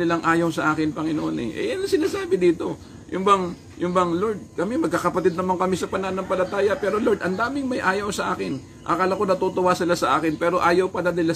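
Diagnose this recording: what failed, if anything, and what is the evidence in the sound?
Nothing failed in this recording, and the sound gives no evidence of any fault.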